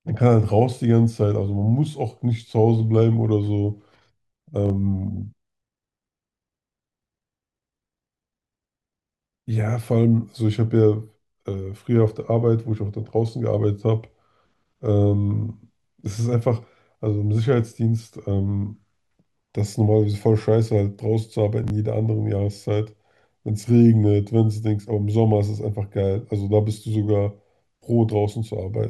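A brief jumbled stutter at 4.66 to 4.70 s and again at 21.64 to 21.70 s: chunks out of order, with a 20 ms chunk played one, then two, chunks late.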